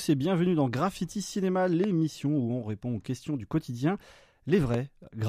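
A sharp loud pop cuts through the speech from 1.84 to 1.86 s and again from 4.74 to 4.76 s, each a single click around ten decibels above the voice, which continues underneath. These are likely voltage spikes from a plug, switch or static discharge.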